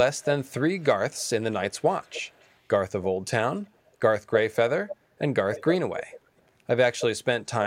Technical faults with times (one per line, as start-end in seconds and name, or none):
0.16-1.30 echo leak
1.63-2.56 echo leak
4.88-4.96 echo leak
5.54-5.64 echo leak
5.96-6.20 echo leak